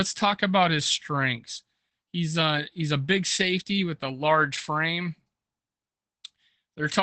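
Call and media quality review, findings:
Opus voice compression, entire clip. Speech muffled, slightly hoarse and robotic, nothing above 8.7 kHz. SILK-mode wideband coding with coarse excitation, consistent with roughly 12 kbps. Unlike a plain low-pass filter, the voice itself sounds grainy and synthetic, not just dull.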